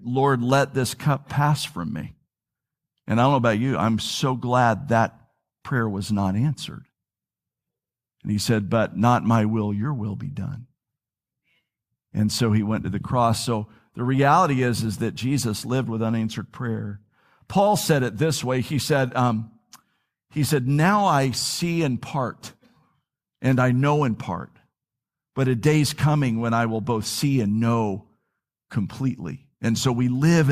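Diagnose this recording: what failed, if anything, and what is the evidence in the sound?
Nothing failed: no stage in the chain leaves an audible fault anywhere in the speech.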